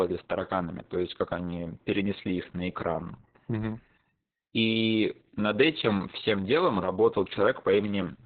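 Heavy Opus voice compression throughout, in a narrowband SILK mode pointing to about 6 kbps, removes everything above 4.4 kHz, leaving the speech muffled, hoarse and slightly robotic.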